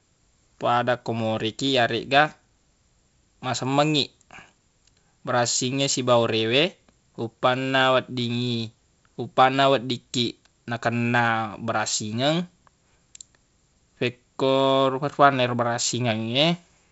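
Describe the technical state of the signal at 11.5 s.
At 11.5 s the speech is intact, carried through G.722 wideband telephone coding with no content above roughly 7.7 kHz and only the light coding roughness expected at 56 kbit/s.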